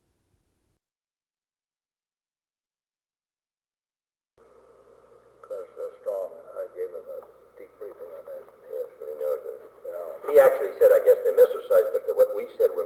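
There are no technical faults to describe at any point in the clip, which passes through an ordinary call path with its usual band-limited sound.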